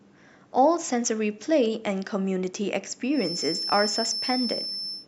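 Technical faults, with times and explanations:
3.08 to 5.08 s, feedback whistle: a thin, steady tone near 5.3 kHz sits behind the speech from 3.08 s to the end of the clip, only slightly quieter than the speech itself and wavering a little in level. The likely cause is sound from a loudspeaker reaching the microphone and being amplified again, with the loop gain just short of runaway, so that one high frequency keeps ringing without growing into a full howl.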